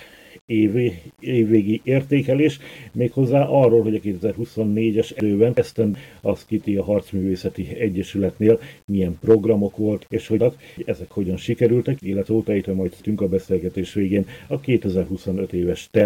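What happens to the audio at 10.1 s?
At 10.03 s the audio has chunks out of order, lasting until 10.77 s. A 0.37 s block arrived one chunk late and plays after the block meant to follow it. Nothing is lost, but the passage sounds jumbled, with three hard joins.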